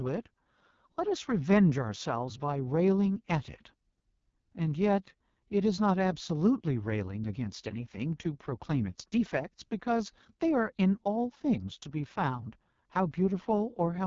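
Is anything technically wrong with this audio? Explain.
Yes. Throughout, the speech carries heavy AMR wideband (HD Voice) codec damage: a raspy, rough texture that points to the lowest 6.6 kbit/s mode, where the pulse model is starved. Unlike narrowband phone audio, it still reaches about 7.2 kHz, then stops.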